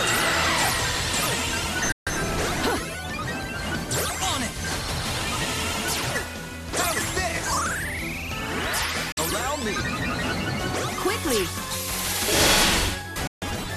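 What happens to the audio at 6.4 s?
Nothing goes wrong at 6.4 s; the audio there is intact, with no dropout, click, distortion or other fault.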